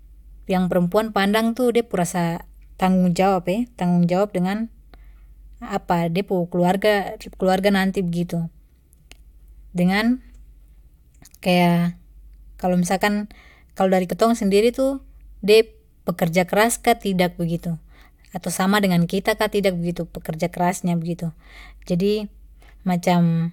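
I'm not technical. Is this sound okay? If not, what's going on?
Yes, this recording sounds fine, with nothing in it that points to a technical problem.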